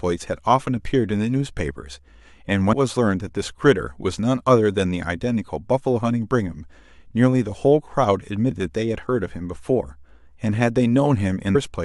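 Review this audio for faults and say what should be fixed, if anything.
Speech leaps ahead at 2.72 s, 8.50 s and 11.54 s, losing around a tenth of a second at the first two and two tenths at the last. These are compressed frames skipped: whole 23.2 ms frames went missing or were rejected as damaged.

To prevent it, re-export or re-transfer from an intact source and confirm the file with a checksum so no frames are lost or corrupted.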